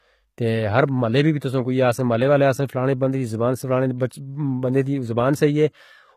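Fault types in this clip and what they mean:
Transcoding between lossy codecs: the speech shows two kinds of coding damage at once throughout, the swirly, smeared highs of a very low-rate first codec with the grain of a later MP3 stage layered on top, likely from a low-bitrate AAC-type encode that was re-encoded to moderate-rate MP3. On a spectrogram, energy ends abruptly at 14.9 kHz, and the upper band shows blotchy, patchy texture. The waveform looks ordinary.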